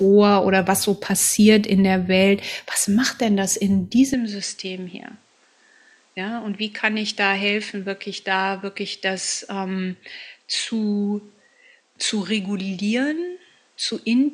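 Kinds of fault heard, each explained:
Input switched to a poorer device: Right after "macht denn das in", at 4.14 s, the speech turns duller and a little quieter, dropping by about 5 dB, and stays that way to the end with no gap at the change. Nothing reaches above 9.6 kHz from there on, and a new background noise sits roughly 40 dB under the speech. This is likely the recording input jumping to a different, narrower-band microphone with its own tone and noise floor.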